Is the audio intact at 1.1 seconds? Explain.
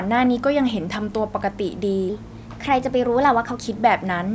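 Yes, the speech at 1.1 s is intact, with only the normal call microphone processing audible, which trims the lowest bass and leaves nothing above 8 kHz.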